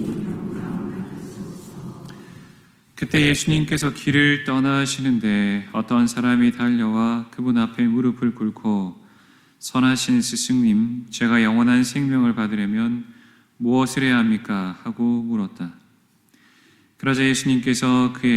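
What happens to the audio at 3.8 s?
At 3.8 s the audio is still in the adaptive stream's low-bitrate start, which runs from 0.0 to 4.0 s. The player began on a lean version to start quickly, so treble is thin and artefacts strong, consistent with roughly 16 kbit/s Opus, until an abrupt, gapless step up at 4.0 s.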